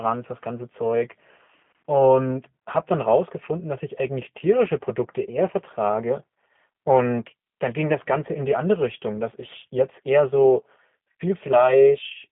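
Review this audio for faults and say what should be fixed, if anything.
G.729 codec damage runs throughout: speech is rebuilt from a vocal tract filter and pulse excitation, sounding rough and synthetic, band-limited to 150 Hz–3.5 kHz, nothing above 3.6 kHz, consistent with 8 kbit/s G.729A. Use a wideband codec such as G.722 or Opus on this link.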